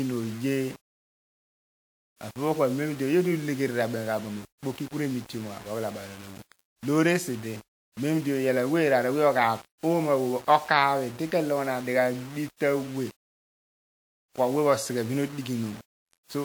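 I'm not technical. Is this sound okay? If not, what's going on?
No. Low bit depth without dither runs through the whole speech clip: a grainy, gritty roughness, especially on quiet parts. It's likely that the sound was stored with very few volume steps, around 7 bits' worth, and rounded with no smoothing noise.

Pre-echo appears at 2.16, 2.31, 4.58 (just before "ku re") and 9.78 seconds. A brief hiss, about 50 milliseconds long, comes just before a sharp sound. Compression spread its noise across a short chunk of audio, so it leaks ahead of the attack and softens it.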